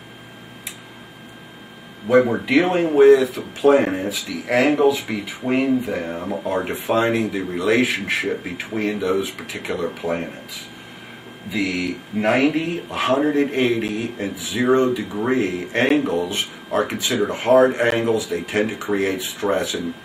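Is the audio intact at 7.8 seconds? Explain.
Yes, at 7.8 s the audio plays through cleanly with no dropout, click, distortion or other fault.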